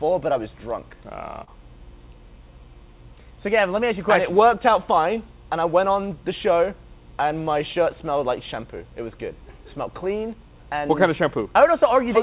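At 1.44 to 1.50 s there is a short concealed packet loss. About 40 ms of the stream never reached the decoder in time, and the receiver covered 30 ms by continuing the preceding sound, then blended back. The result is a brief smear in audio with nothing above 4 kHz, which fits a G.711 call path.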